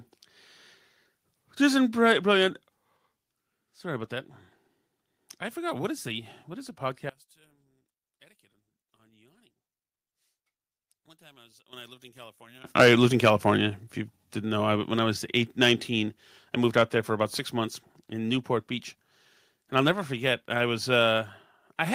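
At 2.97 s the speech drops suddenly by about 4 dB, voice and background together, most likely a microphone volume stepped down, where the call software cut the device's input gain in a single move. Because the step is instant rather than a fade, the level loss lands as an abrupt notch between one moment and the next, with the room sound falling in exactly the same proportion as the speech.

From 7.09 s, right after "the what is a", until 12.64 s, the speech sinks by about 25 dB and turns faint, likely one channel inverted. With one side of the stereo pair flipped in polarity, everything the two channels share cancels when they are summed to mono, so the centred voice almost disappears and only the small differences between the channels remain, leaving a faint residue.

At 11.73 s, still inside that faint stretch, a microphone volume stepped up raises the input gain by 9 dB in one jump, and a second step up of 6 dB follows at 12.75 s. 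Each time the call software judged the microphone too quiet and pushed the device's input up at once, so voice and background leap louder together rather than rising gradually.

That second boost likely drives the input past the converter's ceiling: from 12.78 to 13.51 s the peaks overshoot by about 9 dB, with roughly 2% of samples flattened. This is likely microphone overload, where the tops of the loudest waveform swings are sliced off, giving the strongest syllables a harsh, crackling edge instead of clean peaks.

The gain is then pulled back down in two steps of what is likely the same microphone volume stepped down kind: about 2 dB at 12.84 s, while the distortion is still audible, and a further 4 dB at 13.83 s. Each one is a sudden single-step drop in voice and background together, following closely on the distorted peaks.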